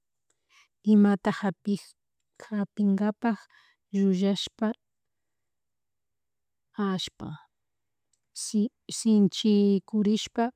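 No technical faults can be heard anywhere in the recording, and the signal holds steady throughout.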